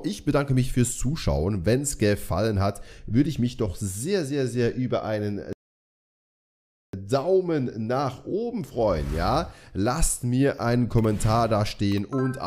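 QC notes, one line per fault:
5.53–6.94 s, rebuffering stall: the sound cuts to silence for about 1.41 s, then picks up at exactly the point where it stopped. The player had used up its downloaded audio and waited for more before carrying on. Unlike a dropout or a dropped packet, where a piece of the material is missing and the sound jumps ahead on return, nothing here is skipped. The pause only adds time, stretching the clip by the same 1.41 s.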